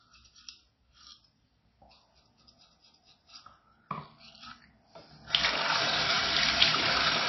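Throughout the clip, the audio was likely squeezed through MP3 compression at a very low bitrate, with a band-limited character that fits roughly 24 kbps. Starved of bits, the encoder discarded the treble entirely, leaving nothing above 5.8 kHz, so the sound is dull and muffled. Weaker frequency lines drop in and out from frame to frame, producing a plainly audible watery, swirling texture, while sharp attacks come across smeared rather than crisp.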